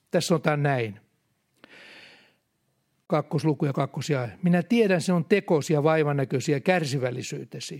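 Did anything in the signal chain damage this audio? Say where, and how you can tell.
Yes, a gap at a join of encoded pieces, codec stage: a 40 ms hole at 3.06 to 3.10 s before "kakkosluku ja kakkosia", from untrimmed encoder delay and padding left between separately encoded segments.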